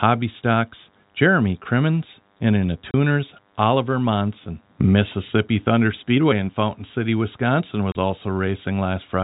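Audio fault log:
Throughout: DECT cordless phone buzz. A thin, steady buzz sits under the speech the whole way, well down, roughly 40 dB below it. It repeats 100 times a second, which points to a DECT handset or base nearby firing its radio burst every 10 ms. Something in the audio chain rectifies that burst, so each burst becomes a tiny click, and the string of clicks reaches your ear as a 100 Hz tone full of harmonics.
2.91 to 2.94 s and 7.92 to 7.95 s: packet loss filled with silence. The speech drops out completely for 30 ms each time, which fits a single lost packet. Instead of smoothing the gap over, the receiver just plays silence there, so the signal stops dead and restarts abruptly. The telephone band limit from the G.711 line coding is audible around it all, with nothing above 4 kHz.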